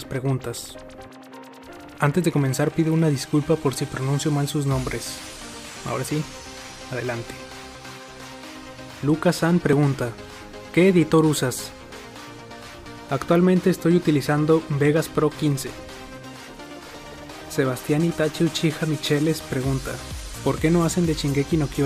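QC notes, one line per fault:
1.79, 7.75, 9.73, 11.72 and 13.70 s: overlap between stream segments. Clicks or tiny skips at 2 s segment boundaries, where overlapping time stamps make the player trim about 6 to 18 ms of sound that wasn't actually duplicated, so the waveform jumps.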